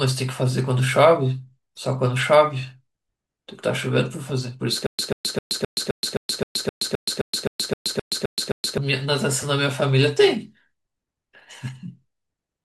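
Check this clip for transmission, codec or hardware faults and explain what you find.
Stutter with silent gaps runs from 4.86 to 8.78 s. Playback likely stalled, replaying its last 137 ms fragment at each retry before running empty for 124 ms. The burst repeats fifteen times every 261 ms, separated by digital silence, and the speech due then is lost.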